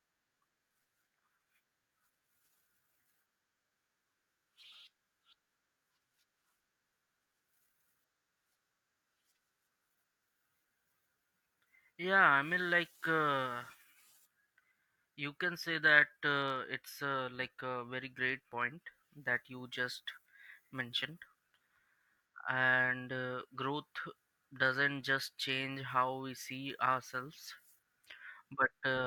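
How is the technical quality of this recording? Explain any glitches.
The technical quality of this recording is sound, with no glitches to explain.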